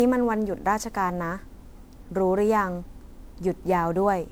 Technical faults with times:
0.00-4.31 generation loss

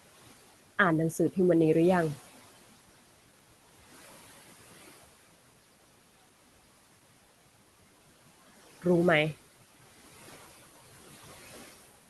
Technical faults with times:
0.00-12.09 noise suppressor artifacts

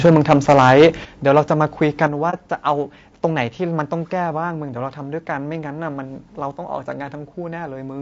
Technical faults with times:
0.00-8.02 low-delay AAC compression
0.04-0.86 microphone overload
0.06 microphone volume stepped down
1.05 microphone volume stepped down
1.36-1.39 microphone overload
2.07 microphone volume stepped down
2.30-2.35 AAC frame loss with muting

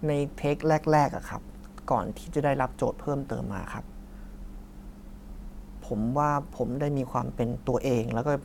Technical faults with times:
3.30 compressed frames skipped
6.50 compressed frames skipped

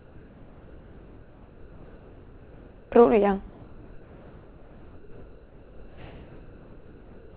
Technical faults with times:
0.00-2.92 comfort noise in place of the background
3.50-7.35 comfort noise in place of the background

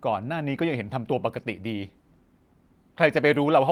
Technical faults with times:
none

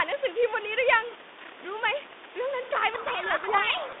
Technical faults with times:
2.94-4.00 codec payload misread

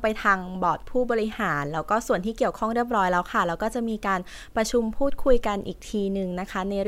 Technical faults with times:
none

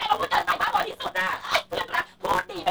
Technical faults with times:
0.00-2.71 block size mismatch (truncated)

